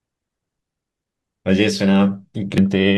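At 2.58 s, near the end of the speech, there is a fault from damaged data in a compressed stream. Corrupted bytes in that part of the file make the decoder misread the frame, lose sync and skip to the next valid frame header. It sounds like a brief chirp, squawk, click or short hole. On a spectrogram it shows as a thin vertical break in the harmonic pattern. On the waveform it is a short, abrupt discontinuity.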